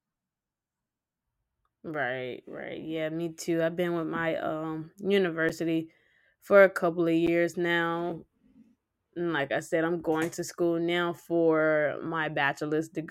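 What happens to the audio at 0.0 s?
Nothing goes wrong at 0.0 s; the speech begins intact, with no dropout, click or distortion at that point.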